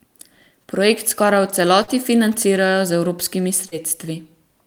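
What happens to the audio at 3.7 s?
Short concealed packet loss from 3.67 to 3.75 s, after "financirajo z evropskimi": about 40 ms never arrived, and the receiver's continuation of the preceding sound leaves a brief smear.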